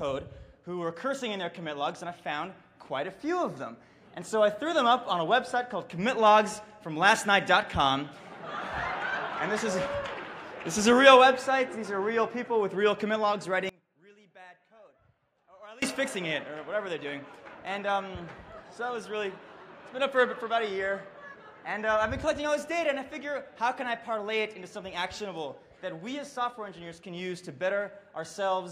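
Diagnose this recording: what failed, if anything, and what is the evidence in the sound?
From 13.69 s to 15.82 s the sound collapses by about 26 dB into a faint residue, then returns at full level. The likely cause is one channel inverted somewhere in the analogue wiring, such as a swapped balanced leg, heard through a mono fold-down, so the content common to both sides cancels and only their difference survives. A dropout or muted path would go silent. Here a faint trace remains, which points to cancellation.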